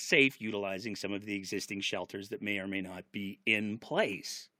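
Compressed frames skipped at 3.46 s, right after "or may not be": the speech jumps ahead by about 20 ms, which fits one lost 21.3 ms frame. The decoder had nothing to play there.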